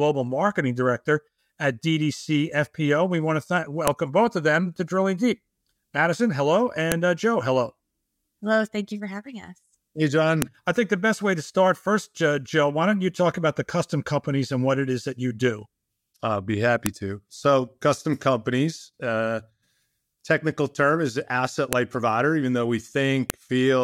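Speech with six sharp clicks at 3.88 s (just before "both of them to"), 6.92, 10.42, 16.86 (after "do I'll be happy"), 21.73 (between "technical term is asset" and "provider even though we") and 23.30 s. Each is a file header played as audio: WAV header bytes left in at a segment join play back as raw samples.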